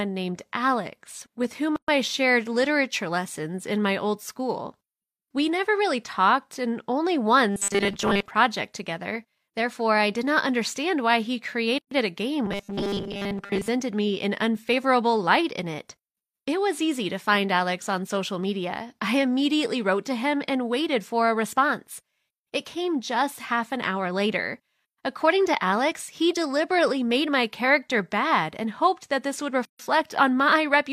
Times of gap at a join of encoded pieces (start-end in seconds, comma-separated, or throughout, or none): 1.76-1.88, 11.78-11.91, 29.65-29.79